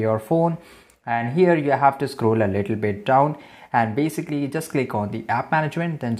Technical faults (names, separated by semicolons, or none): none